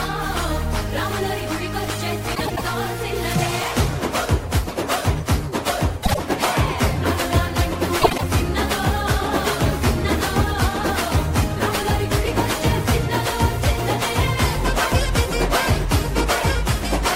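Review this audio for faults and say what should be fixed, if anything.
Frames out of order occur at 2.35–2.62 s, 6.03–6.20 s and 8.01–8.23 s. Two neighbouring runs of frames swap places, so each stretch plays with its halves exchanged. That gives a garbled flutter. The swapped blocks are about 105, 52 and 78 ms, which fits runs of four, two and three frames. Buffer and reorder frames by sequence number before decoding.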